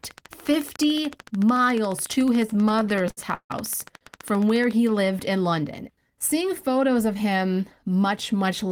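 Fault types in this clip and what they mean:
Train of clicks, 0.04 to 4.72 s: a regular ticking of around 70 clicks at 13.9 per second runs over the speech and pauses, peaking about 5 dB above it and stopping just before "lived in", likely from interference or a faulty connection or power supply.
Repeated stalls (stutter), 2.47 to 3.52 s: packets kept arriving late, so the jitter buffer ran dry again and again. The receiver stretched the last sound for 380 ms in total, about 36% of that stretch, with gaps up to 150 ms, making the speech drag.
Short stall from a late packet, 3.97 s: one packet came about 40 ms late, leaving the jitter buffer empty. The receiver held the preceding sound for 40 ms, then resumed where it left off, so nothing is lost but a sound lingers briefly.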